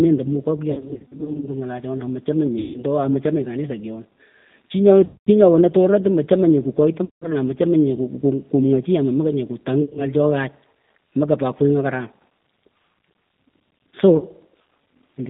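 Throughout, the G.729 codec thins the speech to a band of roughly 150 Hz to 3.7 kHz and leaves it rough and synthetic. Packet loss concealed by the speech codec follows. From 0.71 to 1.50 s, scattered gaps stretch the speech into a fading buzz or noise. Shorter dropouts recur at 2.59, 5.05, 7.05, 9.82 and 14.17 s, each smearing the sound into a decaying tone or noise.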